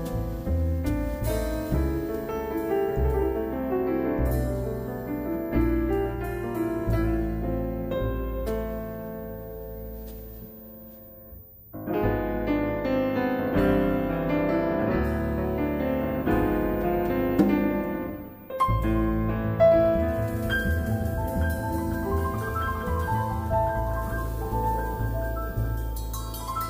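Nothing stood out as a technical problem on listening.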